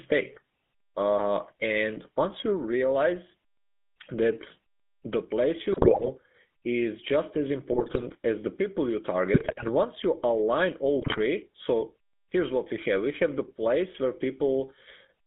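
From start to finish the speech runs through a GSM full-rate codec. It's band-limited to roughly 200 Hz to 3.5 kHz, with the buzzy, gravelly texture of pulse-driven vocal-tract modelling, which fits the old 13 kbps full-rate coder. The damage is plainly audible.

Then come four bursts of GSM bit errors, at 5.72–6.09 s, 7.72–8.05 s, 9.34–9.69 s and 10.99–11.19 s. Corrupted filter, pitch and gain values reach the decoder, so each burst turns the speech into squawks, pops and gargling.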